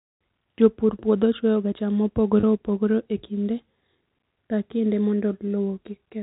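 At 2.40 s, a packet loss with pitch repetition: 30 ms went missing after "puodho chwoyoga cham", so the last pitch period repeats as a brief buzzy hold before "opogore e kinde".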